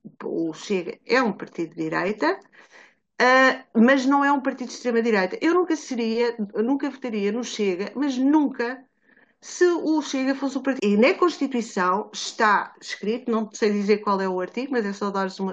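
A speech clip with a stream segment skipped at about 10.78 s. The sound jumps abruptly forward with a small blip, and the speech after the jump does not continue from the speech before it. The likely cause is a segment of the streamed programme that failed to load, so the player moved straight on to the next one. Unlike an ordinary dropout, there is no silent gap or muted stretch. The missing material is simply gone, and playback carries on from a later point.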